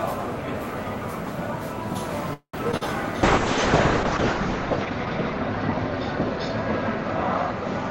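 At 2.33 s the audio stalls for about 0.22 s, until 2.55 s. The last sound is stretched into a fading buzz, then about 90 ms of silence. This is a call audio freeze, likely from packets held up in transit until the jitter buffer ran dry. Playback then resumes where it stopped, now running about 200 ms later, with nothing lost.

Two short concealed packet losses follow, from 2.71 to 2.75 s and from 2.77 to 2.83 s. Bits of audio never reached the decoder in time. The gaps were patched by extending the preceding sound and blending back, heard as a quick smear or wobble.

From 3.25 s to the end, a call bitrate drop sets in. The encoder was forced onto far fewer bits, consistent with a fall from roughly 32 kbps to 6 kbps. The top end is cut from 20 kHz to 8 kHz. The sound turns muffled and rough, worst over a 1.1 s stretch at the lowest rate.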